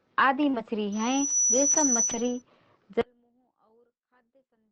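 Right at 0.49 s there's a short concealed packet loss. About 40 ms never arrived, so the decoder stretched the previous sound over the hole, leaving a quick smear up to 0.55 s. Straight after, from 0.53 to 0.63 s, comes a lost packet rebuilt from error correction: three packets, 60 ms in all, played from the low-bitrate copies, so it sounds rougher and noisier rather than gapped.

From 0.92 s a loudspeaker feedback squeal kicks in. The mic is hearing its own speaker, and a 5.9 kHz tone swells over roughly half a second to sit a few dB above the speech until 2.42 s. That pitch sits inside the call's 8 kHz band, so it comes through in full. Under it, at 2.09 to 2.15 s, two more packets were rebuilt from error correction, 40 ms of grainy, noisier audio.

From 3.01 s to the end the sound drops by about 39 dB to a faint remnant, as if everything centred cancelled out. The likely cause is one channel inverted in polarity, so the mono sum wipes out what the two sides share.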